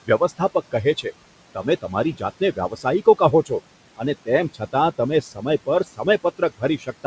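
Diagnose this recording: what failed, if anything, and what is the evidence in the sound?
The call-processing stage is the culprit, specifically the noise suppressor. The room noise sits about 18 dB under the speech, and the suppressor pulls it down by about 17 dB, so it drops away in the gaps and climbs back under each phrase. That's noise suppressor artifacts: it gates bands frame by frame, and nothing passes the G.722 codec's ceiling at 8 kHz.

Same stage, second problem: speech cut by the noise suppressor. It's misreading parts of the talker as noise and ducking them with the background, so bits sound swallowed or faint. From 0.05 to 1.06 s it dips by up to about 18 dB over something like a fifth of a second in total. Between 1.55 and 3.51 s it's up to about 13 dB over roughly half a second. From 3.97 s to the end it's up to about 15 dB.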